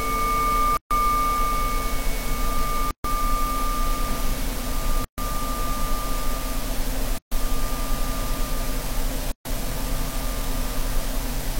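At 0.77 to 0.91 s, 2.91 to 3.04 s, 5.04 to 5.18 s, 7.18 to 7.32 s and 9.32 to 9.45 s, the sound falls silent for about 136 to 138 ms. Each is a gap at a join of encoded pieces: separately encoded segments were joined with their start-up delay and last-frame padding still in place. The edges are abrupt but slightly smeared. Unlike a network dropout, nothing is lost: the sound resumes where it stopped, every 2 s, with a fixed length.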